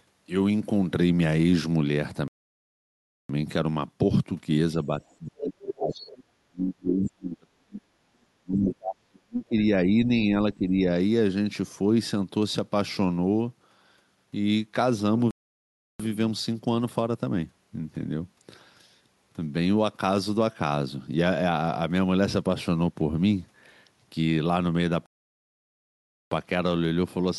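At 2.28 s the sound stops dead. This is a playback stall. It lasts about 1.01 s, to 3.29 s. The player likely ran out of data or was blocked, so the output fell silent until it recovered. The same happens from 15.31 to 16.00 s, a gap of about 0.69 s, and from 25.06 to 26.31 s, about 1.26 s. Each time the flow halts mid-stream, then resumes.

At 4.77 to 4.91 s there is a brief dip of only a few decibels. This is speech suppressed in double talk. The echo canceller likely could not tell the talker from the loudspeaker echo while both sides spoke, so it turned everything down.

From 5.08 to 5.48 s a second voice comes through, roughly 10 dB under the talker. This is the other side's voice leaking through. Echo from the far end was likely not fully removed from the microphone.

From 5.30 to 7.85 s the talker is pushed down hard, by as much as about 40 dB. Inside this stretch, faint scraps of the other side leak through at 6.07 to 6.14 s, about 25 dB down, and at 7.06 to 7.10 s, about 15 dB down. 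They are short.

Suppression returns from 8.41 to 9.56 s, again cutting deep, near 40 dB. A milder dip of about 10 dB follows at 10.54 to 10.74 s.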